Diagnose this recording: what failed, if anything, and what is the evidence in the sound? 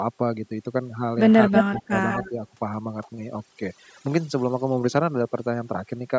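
Overdone noise removal runs through the whole clip, and it's a call-processing problem. The background sits at near silence with little twinkling specks. The suppressor was set too hard, so it keeps clamping individual frequency bands down whenever they drift near its noise estimate, taking the quieter parts of the speech along with them. The band-limit at 8 kHz is just the normal call microphone processing.

Speech suppressed in double talk shows up twice. From 1.48 to 1.94 s the speech dips, about a third of a second in total, with the deepest cut around 25 dB. Then from 2.29 to 2.41 s there's a slight dip of only a few dB. The likely cause is the echo canceller hearing both ends at once, failing to tell the near talker from loudspeaker echo, and ducking everything.

Echo leak sits right in the same stretch, which fits that story. From 1.55 to 1.81 s there's a delayed copy of the speech trailing by 180 ms, roughly as loud as the original. 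A fainter copy with the same 180 ms lag comes back from 2.09 to 2.29 s, about 15 dB down. Most likely a speakerphone end's canceller isn't fully removing what its mic picks up, so part of it gets sent back.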